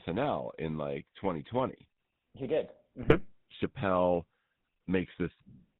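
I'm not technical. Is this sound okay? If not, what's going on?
No. The speech sounds buzzy and gravelly from start to finish, with a muffled, boxed-in quality because nothing above about 4 kHz gets through. That is the GSM full-rate codec, the original mobile phone voice compression. It rebuilds the voice from a simple model of the throat and mouth, fed by a coarse train of pulses, so much of the natural detail is thrown away and replaced with a rough, buzzing texture.

Between 3.02 and 3.19 seconds the sound briefly breaks up into a short squawk and gargle. These are GSM bit errors, the kind a weak mobile signal causes. Some of the data describing the voice arrived corrupted, so for a few short slices of sound the decoder rebuilt the voice with the wrong tone and loudness. That is what makes this fraction of a second burst into garbled noise.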